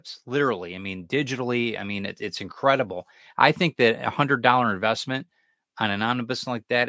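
From 0.37 s to 2.26 s the speech and the background noise swell together, climbing by about 7 dB over nearly two seconds. This is automatic gain rising: the call's gain control judged the input too quiet and raised it gradually, with the audio topping out around 8 kHz through the call microphone path.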